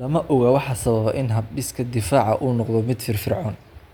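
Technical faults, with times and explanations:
3.75–3.81 s, damaged data in a compressed stream: corrupted bytes make the decoder misread frames and lose sync, so the speech breaks off briefly.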